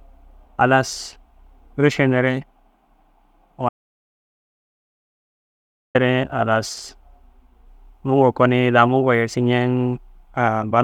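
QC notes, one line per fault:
3.69–5.95 s, audio dropout to silence: speech cuts to silence for about 2.26 s with no room tone, likely from input lost while recording continued.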